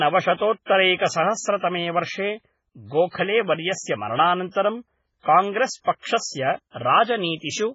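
Throughout the speech, everything above 7.7 kHz is missing, and the remaining sound is heavily watery and swirly as weak frequency components drop in and out between frames. This is likely MP3 compression at a very low bitrate, consistent with about 16 kbps.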